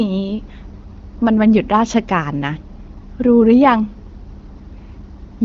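Nothing stood out on listening to this speech, which comes through the AMR wideband (HD Voice) codec at 12.65 kbit/s.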